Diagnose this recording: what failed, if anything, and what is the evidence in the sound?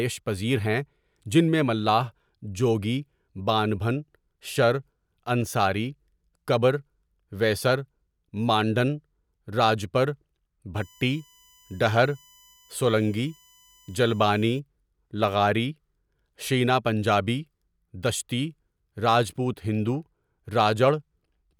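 USB whine from the analogue power and ground wiring runs from 10.76 s to 14.60 s in this speech recording. It is a fixed-pitch whine on a 1 kHz fundamental, strongest at its 3 kHz harmonic, sitting roughly 35 dB below the speech. Current drawn in 1 ms USB frames leaks into the audio path through shared power or ground. The exact 1 kHz spacing, rather than 50 or 60 Hz multiples, rules out mains hum.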